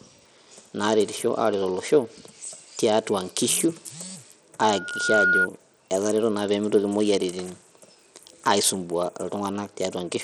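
From the first second the speech sounds dull and gritty: the treble thins out and flickers, and a rough, grainy noise with aliasing clings to each syllable. The likely cause is Bluetooth SBC compression at a low rate, around 80 kbps. Its simple sub-band coder runs short of bits, so the weak top bands get almost nothing and the remaining bands are coarsely quantised.

At 4.62 s a loudspeaker feedback squeal begins. A steady tone at 1.4 kHz swells over roughly half a second until it sits a few decibels above the speech, then stops at 5.48 s. A microphone was picking up the loudspeaker it fed, and at that one frequency the loop gain rose above one. The tone fed on itself and kept growing.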